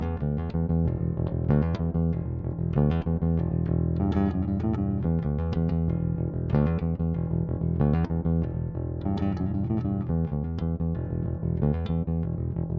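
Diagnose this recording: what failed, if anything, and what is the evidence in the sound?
Nothing stood out on listening: the audio carries only the ordinary signature of call microphone processing, with nothing above 8 kHz and the lowest bass trimmed away, and no stage of the chain shows a failure.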